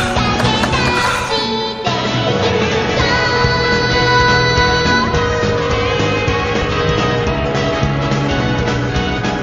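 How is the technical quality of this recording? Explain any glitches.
The recording has two kinds of glitches: brief decoding blips from damaged compressed data, and a stretch of rapid clicking near the end.

Damaged data in a compressed stream shows up at 3.24 s and again at 6.61 s, each as a brief decoding glitch. Corrupted bytes make the decoder misread a frame and resynchronise on the next header. A click train, by contrast, repeats over a stretch.

A train of clicks runs from 6.07 s to 9.40 s: around forty similar pops at about 11.3 per second, unevenly spaced and peaking roughly 5 dB above the sound. The likely cause is interference or a faulty connection. The clicks keep a uniform shape and persist, unlike isolated decoder blips.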